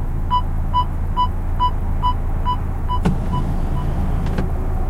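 No technical faults are audible.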